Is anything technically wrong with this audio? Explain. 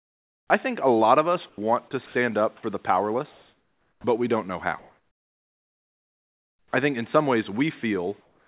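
Yes. The call's voice activity detection and discontinuous transmission disturb the pauses and some of the speech. The audio has nothing above 4 kHz, as expected from a narrowband call codec.

Comfort noise in place of the background appears from 0 to 0.5 s, from 3.32 to 4.04 s (between "up for the powerless" and "we don't know how"), from 4.79 to 6.71 s, and from 8.21 s to the end. The sender most likely stopped transmitting during these pauses, and the receiver filled them with synthetic noise. The real background, sitting about 40 dB below the loudest speech, gives way to a flat, featureless hiss. That hiss is quieter than the real background, by about 7 dB in the first gap, about 4 dB in the second and third, and about 5 dB in the last.

Onset clipped by the voice detector occurs at 0.48 s, just before "I think a lot", and from 4.01 to 4.04 s, just before "we don't know how". The detector was likely slow to register that speech had resumed, so the first 20 ms and 30 ms were never sent and comfort noise covered them. 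Each phrase starts abruptly, with its soft attack missing.

Sound dropped by the voice detector occurs from 1.49 to 1.58 s and from 2.06 to 2.15 s. Here the detector likely mistook part of the speech for background and briefly stopped sending. About 80 ms and 50 ms of speech are replaced by steady noise, which leaves short holes where the speech thins out into hiss before returning.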